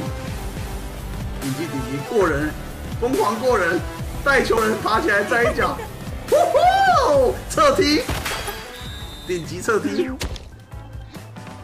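Two CD skips occur, at 0.57 s and 4.57 s, each a brief mute of a few milliseconds heard as a tick, after which the audio resumes from a different point. The laser has jumped to another turn of the disc's spiral, displacing playback.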